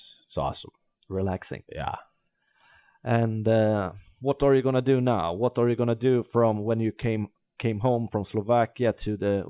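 No technical faults are audible.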